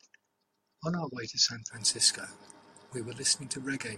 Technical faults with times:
1.46 dropped samples

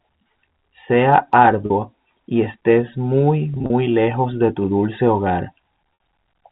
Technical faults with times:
1.66-1.70 packet loss with pitch repetition
3.54-3.70 packet loss with pitch repetition
5.94-6.00 packet loss with pitch repetition

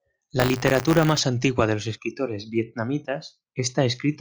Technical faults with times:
0.39-1.20 buffer tearing

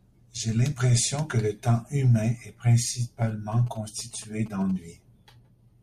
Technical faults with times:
3.28-4.71 GSM signalling bursts

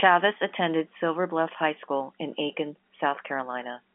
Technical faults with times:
none

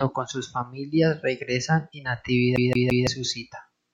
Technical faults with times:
2.56-3.07 CD stuck on one turn

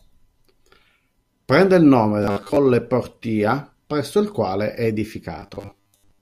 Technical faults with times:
2.22-2.56 robotic sound from repeated short buffers
5.40-6.22 robotic sound from repeated short buffers

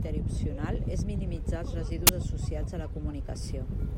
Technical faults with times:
2.07-2.09 uninitialised buffer

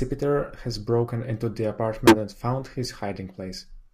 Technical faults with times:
2.07-2.17 corrupt frame decoded
3.36-3.40 corrupt frame decoded

